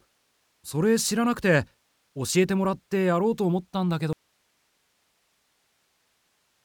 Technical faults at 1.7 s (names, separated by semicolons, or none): none